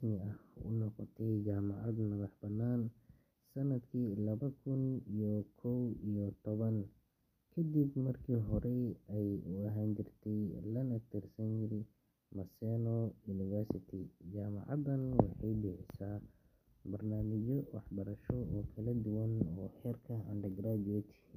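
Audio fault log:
No audible faults anywhere in this speech recording.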